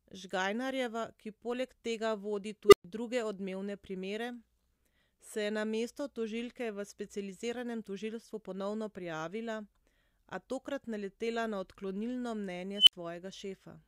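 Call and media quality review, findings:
Unstable filter, 2.68–2.84 s, after "ki poleg tega vodi", before "druge odmevne primere": low tone near 400 Hz swells over 44 ms, clips, then 120 ms silence. Recursive filter with bad coefficients; output runs away, overflows, mutes until reset.

Unstable filter, 12.76–12.93 s, after "tokrat naletela na odklonilno": squeal near 3 kHz builds over 111 ms, clips, then 60 ms dropout. Same runaway feedback, overflow and reset.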